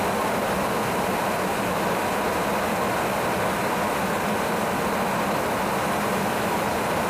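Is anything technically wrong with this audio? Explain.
No, nothing technically wrong can be heard in this audio.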